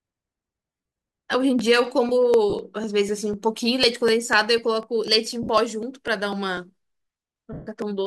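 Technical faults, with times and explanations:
0.10 to 7.82 s, periodic USB or driver dropouts: a tiny slice of audio, roughly 1 ms, is skipped every 0.249 s, around thirty times across the clip. A background task is stalling the USB bus or audio driver on a fixed schedule, and the samples it blocks are simply never delivered. Each skip leaves a step discontinuity in the waveform, so the speech carries a steady train of ticks at about four per second that are audible only while there is signal to break.
0.72 to 0.96 s, 2.50 to 2.53 s, 5.43 to 5.49 s and 7.53 to 7.67 s, lost LE Audio frames: Bluetooth LE Audio frames go missing, 150 ms scattered over the first span with runs of roughly 40 ms at most, then 30 ms, 60 ms and 140 ms. The losses fit 10 ms frames. For each gap the LC3 decoder conceals by repeating the last good spectrum with randomised signs, fading it after a few frames, so the voiced speech turns briefly into a hissy, smeared wash instead of clear tones.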